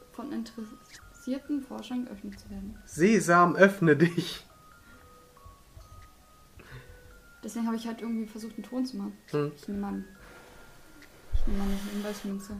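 Nothing stood out on listening to the clip.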